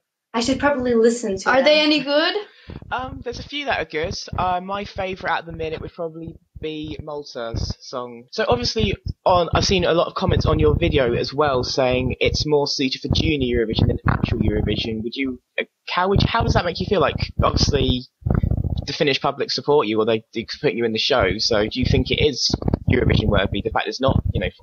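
Gain pumping runs through the whole clip, with the level swinging by around 10 dB. This is likely the input gain being set far too high for the microphone, so a fast limiter or compressor keeps clamping down on every peak and releasing in the pauses. The result is audio with loud and soft parts squeezed close together and a squashed, breathing quality.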